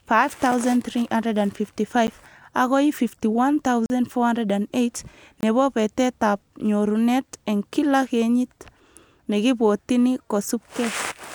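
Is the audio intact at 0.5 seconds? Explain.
No. At about 0.52 s the speech drops into a block of digital silence roughly 3.8 ms long: a run of samples is replaced by zeros, and the waveform stops and restarts with no fade. Because the gap is so short, it is heard as a tick or dip, not an audible hole. An impulse click adds a spike to the sound, while this gap briefly removes it altogether.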